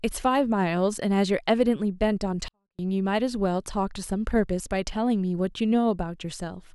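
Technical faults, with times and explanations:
2.48 to 2.79 s, 24-bit alignment error (too quiet): for about 0.3 s the speech suddenly sinks to near silence, then comes straight back. The samples here were written as 24-bit values sitting in the low bytes of a 32-bit word, but got read as full 32-bit integers. That puts everything roughly 256 times too small, about 48 dB down. The waveform itself stays clean and undistorted, it's just so faint you can barely hear it.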